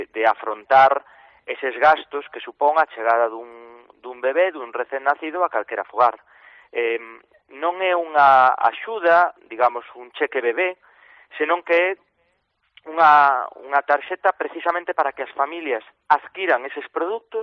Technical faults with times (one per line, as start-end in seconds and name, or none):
none